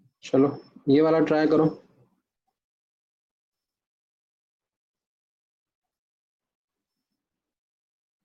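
From 4.97 to 7.43 s, repeated packet loss (robotic sound) sets in: data keeps arriving late or not at all, and each hole, none longer than 40 ms, is filled by extending the preceding sound. About 440 ms is patched this way, leaving the audio choppy with pieces missing.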